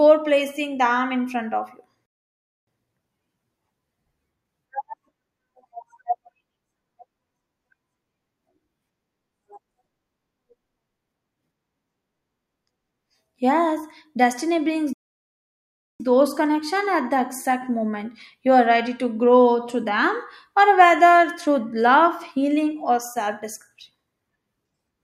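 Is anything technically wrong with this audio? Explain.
Yes. There are two playback stalls, at 2.06 to 2.67 s and 14.93 to 16.0 s. The speech cuts out mid-flow into silence for about 0.6 s and then about 1.1 s before resuming. The likely cause is the player starving for data or its thread being blocked, so output halts until it recovers.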